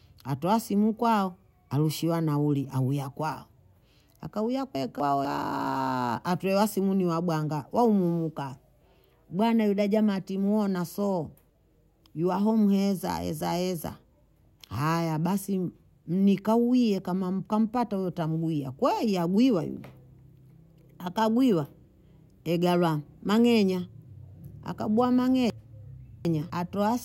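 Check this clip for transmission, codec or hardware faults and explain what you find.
One fault recurs three times in this speech: chunks out of order. At 4.75 to 5.25 s, 11.5 to 12.0 s and 25.5 to 26.5 s the speech briefly jumbles, as if a fragment jumped ahead. A 250 ms block of audio was delivered late and played after the material meant to follow it, which sounds like one block's displacement in the first two spots and about three in the last. Nothing goes missing, but each swap leaves abrupt joins.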